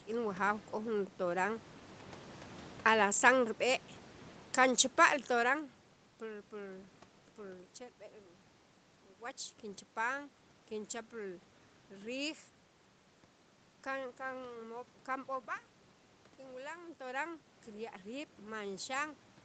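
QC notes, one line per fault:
No fault lines to record for this clip.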